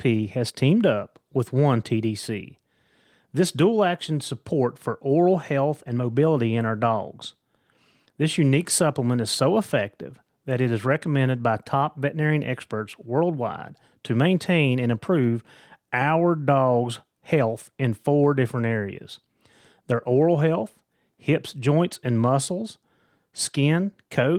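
No faults in this speech.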